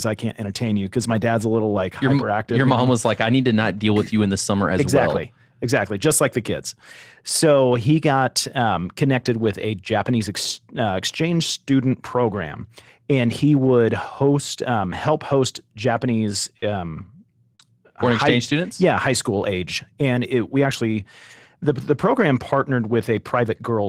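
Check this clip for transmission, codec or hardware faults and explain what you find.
Two packet-loss events disturb the speech near 16.6 s and 17.6 s, each with a rebuilt packet inside.

Burst of packet loss, 16.57 to 16.65 s. The receiver extends the last sound for 47 ms and fades it. Then 40 ms of speech are simply skipped.

Short concealed packet loss, 17.55 to 17.62 s, just before "foreign high exchange students". About 41 ms are synthesized from the preceding sound. It leaves a brief smear where 40 ms are gone.

Lost packet rebuilt from error correction, at 16.62 to 16.64 s and 17.59 to 17.61 s. A low-bitrate backup copy replaces each lost 20 ms packet. Those frames sound rougher and noisier, with no gap.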